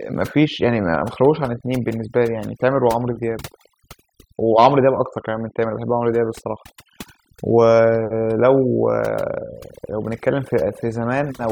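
Overdone noise removal runs throughout, where aggressive suppression mutes frequency bands near the noise estimate. This leaves twinkling specks in near-silence and strips away quiet parts of the speech.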